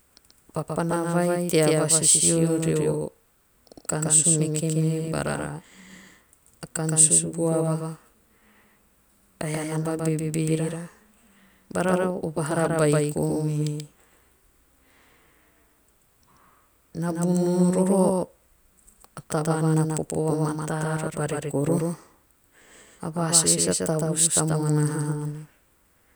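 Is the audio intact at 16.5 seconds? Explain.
No, at 16.5 seconds a doubled audio track runs through the whole clip: a second copy of the speech trails by roughly 150 ms, about 5 dB quieter, with no decay, likely from a slower capture path.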